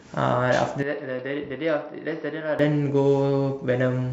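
From 0.83 to 2.59 s, likely an input switched to a poorer device: the spectrogram empties above 5.8 kHz, and the waveform shrinks about 10 dB.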